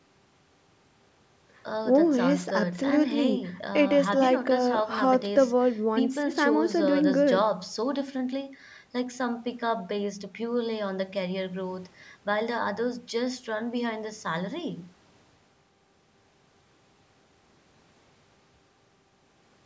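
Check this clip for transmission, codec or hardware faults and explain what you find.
No transmission, codec or hardware faults are audible in this speech; the absence of content above 8 kHz and the trimmed lowest bass are just the call microphone processing it passed through.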